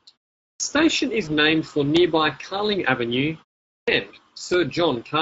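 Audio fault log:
Throughout, Speex codec: the speech has that grainy, hoarse edge you get from a CELP coder that doesn't have much to spend on the excitation signal. The damage is plainly audible, with a rough, noisy texture riding on every syllable rather than a clean tone. The sound fits a Speex mode around 16.8 kbps, where the codec models the voice rather than preserving the waveform, so the breathiness and buzz come from the model filling in the detail.
0.52–0.60 s and 3.78–3.88 s, clipped start after a pause: both times, speech comes back after a short gap of about 0.4 s and the onset is missing, so the first sounds snap in abruptly out of silence. Roughly 80 ms are lost the first time and about 96 ms the second. It behaves like an output device dozing off during the pause and needing a moment to wake up, while the audio it should have played goes nowhere.
1.25–1.32 s, VoIP packet loss concealed by the speech codec: there's a brief smeared stretch here where the voice seems to hold its last shape and sag. 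That fits a single lost 20 ms frame that the decoder papered over by extrapolating from its previous pitch and filter while lowering the gain. Because each frame leans on the one before, the sound stays a bit weak and off for a few tens of milliseconds after the gap.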